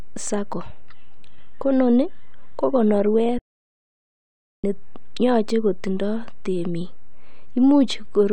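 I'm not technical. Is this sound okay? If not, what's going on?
No, there's an audio dropout to silence from 3.39 to 4.64 seconds. For about a second and a quarter the speech stops dead, and the gap is total silence, without even the faint background hum of the room. The likely cause is that the input was briefly lost, perhaps a loose connection or an accidental mute, while the recorder kept writing blank audio. Whatever was said then is gone, and the speech resumes abruptly with "ne yoche kotindo temik".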